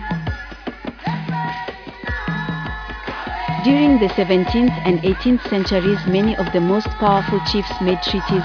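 No technical faults are audible.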